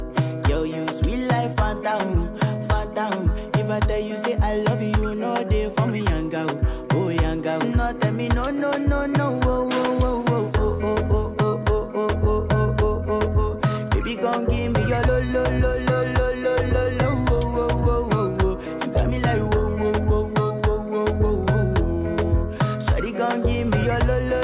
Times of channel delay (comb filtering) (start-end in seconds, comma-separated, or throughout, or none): none